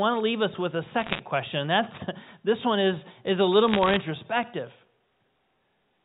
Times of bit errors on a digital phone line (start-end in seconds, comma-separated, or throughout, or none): 1.00-1.20, 3.68-3.97